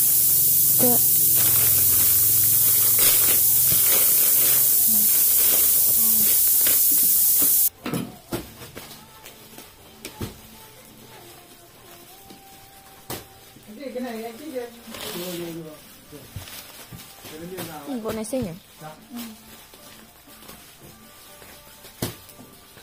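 From the start to 7.68 s, low bit depth with noise shaping: the sound is reduced to about 3 bits, and the rounding error is fed back so that it lands mostly in the upper frequencies. The result is a steady, thin hiss that climbs sharply toward the top of the band. Plain bit reduction would give grainy distortion that follows the signal. Here the error is a constant, bright hiss instead.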